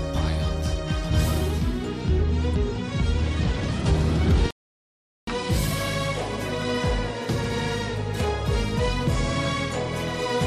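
At 4.51 s there's a rebuffering stall: the player drained its downloaded audio and simply waited. The sound drops to silence until 5.28 s, then picks up exactly where it paused, so nothing's missing, but roughly 0.77 s of dead air gets added.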